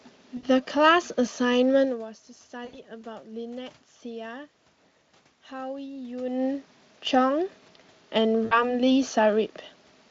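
At 0.37 to 0.48 s, 2.65 to 2.79 s and 8.45 to 8.81 s, VoIP packet loss concealed by the speech codec fills gaps of about 60, 80 and 60 ms with a stretched, fading buzz instead of silence. The speech stays weak afterwards, longest at 8.45 s.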